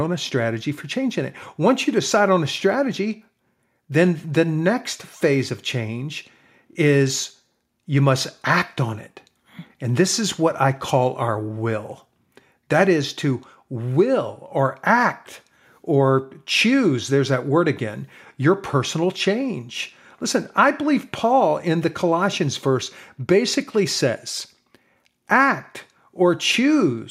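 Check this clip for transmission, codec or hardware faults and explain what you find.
Listening through the speech, nothing stood out as a problem.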